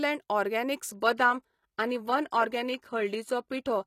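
At 0.89 s the speech suddenly drops to an adaptive stream at a lower bitrate, without a gap. Codec artefacts rise, which fits a switch to a low-rate HE-AAC stream.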